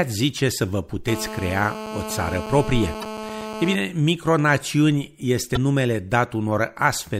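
From 1.08 s to 3.75 s, GSM phone buzz sits under the speech. A nearby 2G phone on a call pulses its transmitter about 217 times a second. The audio circuit rectifies those pulses. The result is a steady, raspy 217 Hz buzz, rich in harmonics, about 10 dB below the speech.

Damaged data in the compressed stream appears at 2.99 to 3.04 s, inside the buzz, and again at 5.53 to 5.57 s. Corrupt bytes make the decoder misread frames and lose sync. It hunts for the next frame header. Each spot is a brief glitch as the decoder recovers.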